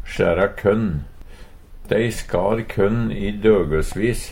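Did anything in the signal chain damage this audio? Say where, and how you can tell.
No, nothing in the signal chain stood out as damaging this audio when I listened to it.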